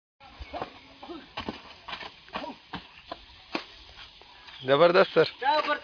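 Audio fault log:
Nothing to log here, as no technical faults turn up anywhere in the clip.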